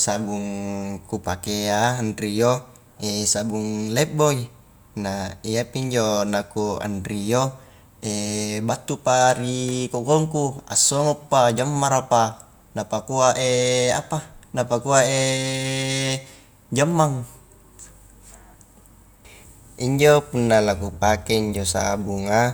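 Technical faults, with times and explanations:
Nothing in this speech recording stood out as a technical problem on listening.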